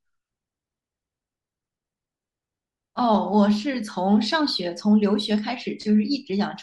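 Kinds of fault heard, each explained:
Bluetooth LC3 compression: The speech has likely passed through the LE Audio transform codec, which codes the signal in short blocks; the sound fits 7.5 ms frames at around 48 kbps. At that rate the encoder discards parts of the upper spectrum and fills them with generated noise. The damage is plainly audible throughout this clip: the speech carries a breathy, grainy edge where fine high-frequency detail should be.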